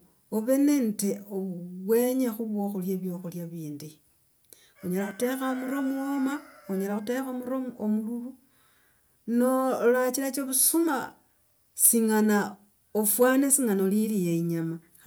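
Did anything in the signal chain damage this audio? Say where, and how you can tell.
Yes: hard clipping at the converter input, at 11.83 to 11.90 s (about 11 dB over) and 13.10 to 13.55 s (about 4 dB over). Waveform peaks are sliced flat, and the spectrogram shows harsh harmonics spraying upward.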